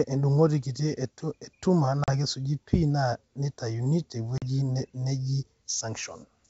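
Speech over a G.722 wideband link, with packet loss on the ADPCM call at 2.04 s and 4.38 s. Each time, roughly 40 ms, about two packets' worth, drops to hard-edged silence. When the sound resumes, the decoder's predictor and step size briefly disagree with the sender's, so the speech returns slightly distorted.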